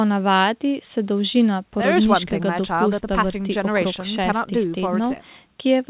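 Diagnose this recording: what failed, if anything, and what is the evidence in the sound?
Nothing stood out on listening: the speech comes across with the narrow band expected of a G.711 mu-law call path, with nothing above 4 kHz, and no stage shows an audible failure.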